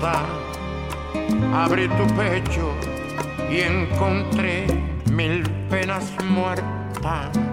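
Nothing goes wrong anywhere in this audio; there's no technical fault to point to at any moment.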